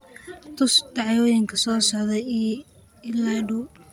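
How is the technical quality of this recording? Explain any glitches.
No glitches or faults detected.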